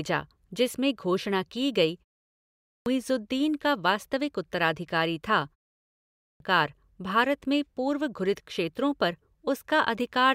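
Clipped start after a pause at 2.27 to 2.86 s and 5.80 to 6.40 s in this speech: after pauses of about 0.3 s the output device sleeps and must wake again, swallowing roughly 0.6 s each time, so speech following "जिसमें घोषणा की गई" resumes abruptly at "दीन का वास्तविक उत्तराधिकारी".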